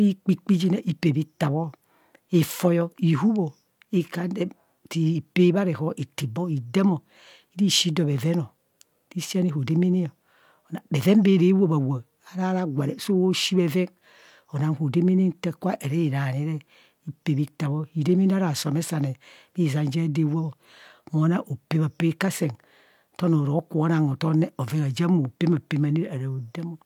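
Nothing in this speech recording stood out as a technical fault on listening.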